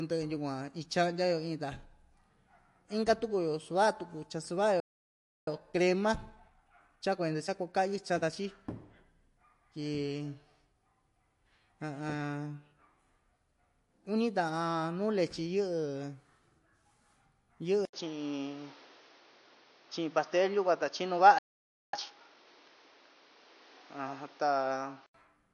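Throughout, likely low-bitrate MP3 compression, fitting roughly 48 kbps, leaves the speech plainly watery, with swirly sibilants and smeared onsets.

At 4.80 s the player likely ran dry and hit a playback stall, so the speech cuts out for 0.67 s before resuming.

From 5.47 to 8.47 s a time-compressed catch-up trims the backlog by splicing out small pieces, and the speech runs 1.1 times faster at normal pitch.

At 17.85 s the input likely switched to a poorer device. After an 80 ms gap, until 25.14 s, the band narrows, so the sound turns dull and boxy. The level shifts by about 5 dB, and new background noise sits well below the speech.

Within that stretch, at 21.38 s, a second playback stall silences the sound for 0.55 s.

From 21.93 to 22.47 s a second catch-up follows, hurrying the speech at double speed while the pitch stays normal.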